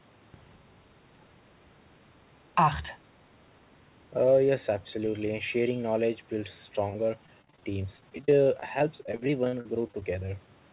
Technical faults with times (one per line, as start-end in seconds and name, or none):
6.90-10.48 repeated packet loss (robotic sound)